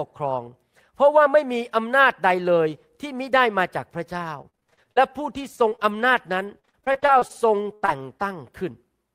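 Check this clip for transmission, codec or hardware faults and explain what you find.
Choppy, robotic speech from 4.41 s to 8.33 s is repeated packet loss. Twenty-seven gaps, the longest 80 ms, were patched by stretching the preceding sound. About a second of audio was rebuilt that way, leaving chunks missing throughout.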